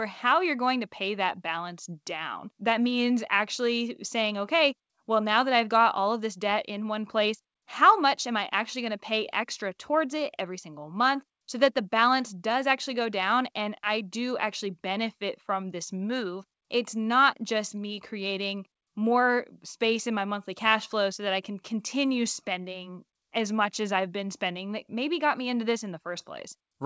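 No technical faults can be heard anywhere in this speech recording.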